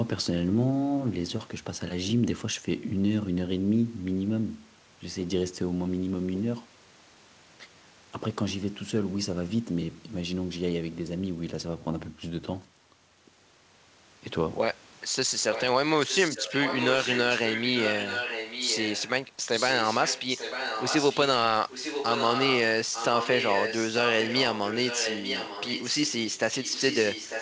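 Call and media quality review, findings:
Echo leak: far-end echo canceller likely failing to remove its loudspeaker signal from the mic, returning it to the talker. Speech gets a delayed copy about 0.9 s late, about 5 to 10 dB below the direct speech. Brief at 15.52 s, sustained 16.01–19.1, 19.55–21.24, 21.7–22.57, 22.93–26.12 and 26.31–27.41 s. The echo has no content above 8 kHz, consistent with a G.722 wideband call path.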